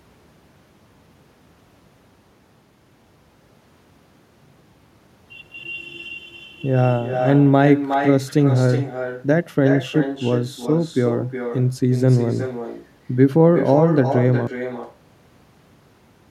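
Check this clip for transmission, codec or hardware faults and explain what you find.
Two faults stand out: an echo with no canceller running the whole way through, and a cut-off end.

The echo is present from start to finish. The far end is playing the call over a loudspeaker, its microphone catches it, and nothing cancels it, so the speech returns after the network round trip. You hear a thinner copy, about 9 dB down, trailing each phrase by roughly 400 ms.

The cut-off end hits at 14.47 s. The final buffers were never written out, so the speech stops mid-sound and drops straight to digital silence with no natural decay. That dead silence fills the rest of the clip.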